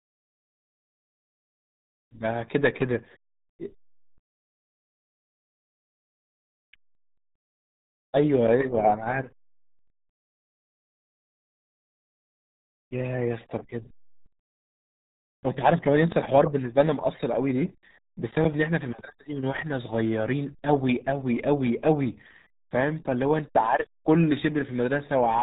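Throughout the clip the speech has passed through the RealAudio 14.4 codec, squeezed into a bitstream so narrow it points to roughly 8 kbit/s. Nothing above 3.8 kHz survives, and the heavy coding damage leaves the speech muffled, gargly and smeared.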